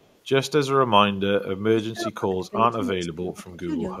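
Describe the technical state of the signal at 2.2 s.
At 2.2 s the speech sits inside a stretch of speech suppressed in double talk, running from 1.61 to 3.71 s. It dips by up to about 25 dB, likely from an echo canceller muting near-end speech while the far side talked. On the waveform, the envelope drops in patches; the spectrogram shows energy thinning.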